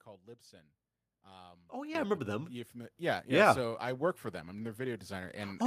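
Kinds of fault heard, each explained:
Microphone volume stepped up: the input volume gets pushed up in sudden jumps, about 10 dB after "oh yeah", then about 4 dB and 3 dB, lifting voice and background together.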